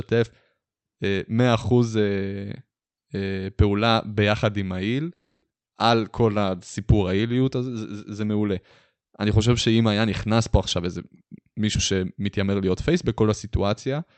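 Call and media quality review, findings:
Call audio freeze, 5.13–5.44 s: last sound stretched into a fading buzz, including about 40 ms of silence, then resumes where it stopped. Likely delayed packets draining the jitter buffer; roughly 290 ms gap inserted, nothing lost.

Skip ahead, 5.60–5.63 s: abrupt forward jump with a near-seamless join. About 150 ms of audio dropped, consistent with jitter buffer overflow discarding queued audio.

Jitter buffer slow-down, 5.96–7.40 s: playback at 91% speed, same pitch, drawn-out sounds. Repeated pitch periods added 140 ms to rebuild buffer reserve.

Jitter buffer speed-up, 10.77–12.91 s: hurried delivery at 113% speed, pitch unchanged. Repeated removal of short pitch-period pieces trimmed roughly 0.3 s to cut excess buffer delay. Opus coding noise and the 8 kHz top-end limit are present throughout.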